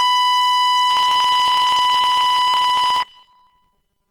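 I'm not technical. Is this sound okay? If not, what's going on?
No. Two things went wrong. Across the whole clip, the music was squeezed by what is likely Opus compression with too little data to spare. The encoder fills the gaps with approximations, so instruments sound rough, grainy and noisy rather than clean.

From about 0.90 s to the end, there is robotic sound from repeated short buffers. The playback system likely ran short of fresh audio and kept replaying tiny chunks, about 5 ms each, so roughly half the real music is skipped. The result is a stiff, metallic 200 Hz buzz over everything.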